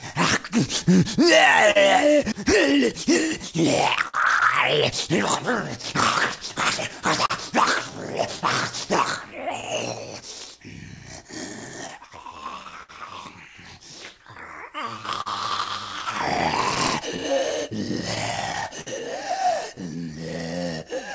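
Clock drift between sender and receiver runs through the whole clip. The sending side's clock is slow by roughly 4 percent, so the jitter buffer keeps drifting toward empty and the receiver must keep stretching the sound to stay fed. This produces small, unevenly spaced timing wobbles rather than one clear defect.

Repeated timing corrections follow from that drift, from 0.00 to 20.85 s. The receiver keeps repeating short slivers, all in the same lengthening direction, playing the sound at about 99 percent speed and adding roughly 300 ms overall. They are heard as faint hiccups and a slightly unsteady pace.

Scattered short gaps appear in five stretches: 1.71 to 4.15 s, 5.82 to 7.32 s, 10.99 to 12.91 s, 14.38 to 15.28 s and 16.38 to 18.88 s. Each stretch holds a handful of lost or late packets, about four to seven, none longer than about 50 ms. The receiver bridged each hole by extending the preceding sound, leaving brief ticks and smeared moments. 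The band is cut off above 8 kHz, which fits G.722 at 64 kbps on the call path.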